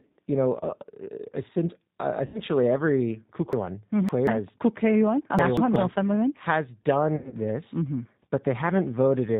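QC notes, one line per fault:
throughout: G.729 codec damage, plainly audible. The speech is being carried at 8 kbit/s, most likely by the G.729A variant, which rebuilds each 10 ms frame from a vocal tract filter, a pitch predictor and a handful of coded pulses rather than the waveform itself. Everything above 4 kHz is gone, so sibilants lose their edge, and the reconstruction leaves a rough, slightly synthetic grain on every syllable.
2.26–2.41 s and 7.16–7.34 s: VoIP packet loss concealed by the speech codec. The first gap follows "uh since uh" and covers 80 ms of lost audio; the second covers 120 ms spread over 160 ms, with the longest unbroken stretch 80 ms. In both, the decoder keeps repeating its last pitch and filter at falling gain, so the sound smears into a fading buzz or coloured noise, and since each frame builds on the one before, it takes a moment to recover.
3.53–4.27 s and 5.39–5.76 s: chunks out of order. 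Blocks of about 186 ms play in the wrong sequence: in the first span one block turns up three blocks late, in the second one block late. No audio is missing, but the swapped segments produce hard joins and a brief jumbled stretch where the speech runs out of sequence.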